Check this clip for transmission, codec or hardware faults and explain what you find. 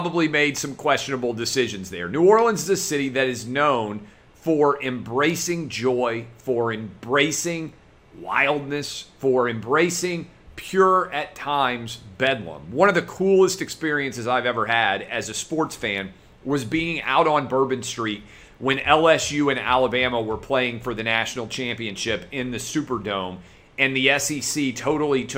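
Nothing stood out on listening to the clip.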